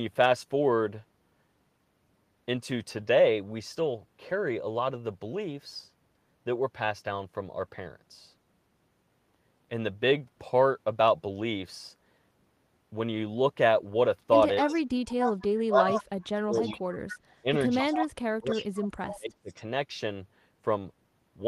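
From 14.59 to 17.34 s there is an echo leak: a copy of the speech returns 265 ms late, only slightly quieter than the original. The delay gives it away as echo rather than reverberation. It is likely caused by a loudspeaker echo canceller on the far end that let its microphone pickup through.

Overlapping this, speech is suppressed in double talk: a shallow dip at 14.61 to 14.79 s, then deep cut-outs at 15.5 to 16.83 s and 17.42 to 19.52 s. The speech is turned down, likely because the canceller attenuated everything while both sides spoke.

From 17.88 to 19.63 s the echo leak returns, much fainter but with the same 265 ms delay.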